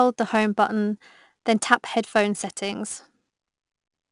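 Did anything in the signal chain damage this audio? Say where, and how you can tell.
Yes, at the codec stage. This is 4-bit ADPCM compression, plainly audible across the whole speech clip. A gritty hiss rides on every loud sound and tracks its level. Nothing sounds above 10.6 kHz, which fits a stream near 89 kbps. Each sample is coded as a coarse 4-bit step from a prediction, and that error becomes noise.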